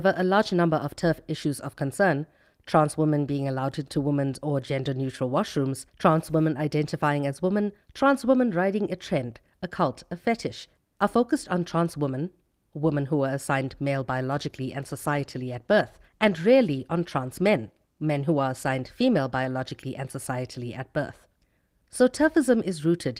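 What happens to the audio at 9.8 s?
Nothing goes wrong at 9.8 s; the speech runs through that moment intact, with no dropout, click or other fault to be heard.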